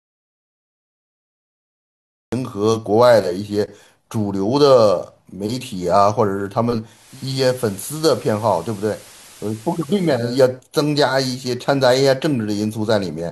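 The speech opens on dead digital silence until 2.32 s, an audio dropout to silence already under way, likely from a lost input while the recorder kept writing silence. At 6.87 s there's digital radio blending to analogue: a 357 ms cross-fade to the FM feed brings in hiss around 25 dB down and drops the level about 2 dB, before it blends back at 10.42 s.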